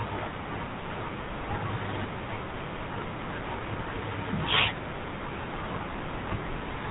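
Throughout, GSM full-rate coding gives the speech a buzzy, gravelly roughness and nothing above 4 kHz, which fits a 13 kbps rate; simple band-limiting would muffle without that grit.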